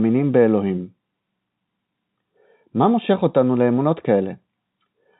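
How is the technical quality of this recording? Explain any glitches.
The technical quality of this G.711 telephone-coded speech holds up, and there are no glitches to explain.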